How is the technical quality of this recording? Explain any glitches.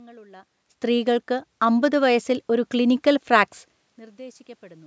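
There's one real glitch, a slow level creep partway through. Between 0.8 s and 3.58 s you get automatic gain rising: the call's gain control judged the input too quiet and eased its gain up by about 5 dB over those few seconds. The giveaway is that the room noise swells right along with the voice, so it's the whole signal being turned up, not someone getting closer. The level shifts around 0.5 s and 3.5 s are just the talker moving relative to the mic, and the top end stopping at 8 kHz comes from the call's microphone processing.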